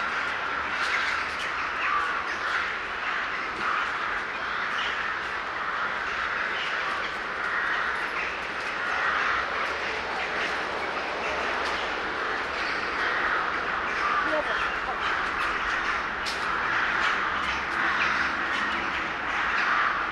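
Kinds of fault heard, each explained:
Nothing stood out as a problem when listening to this recording.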